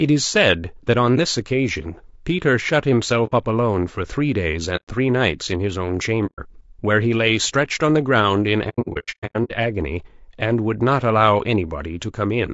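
Throughout, the speech sounds rough and grainy, with noise filling the gaps between harmonics and a thin, artificial-sounding top band. This is likely low-delay AAC compression (AAC-ELD) at a low bitrate, consistent with about 32 kbps, where short frames resolve pitch poorly.

AAC frame loss with muting occurs at 3.26–3.32 s, 4.76–4.88 s, 6.26–6.40 s, and in a scattered burst from 8.69 to 9.51 s, where gaps of roughly 100 ms at most add up to 540 ms. Missing frames were decoded as silence, leaving soft-edged holes that fade out and back in.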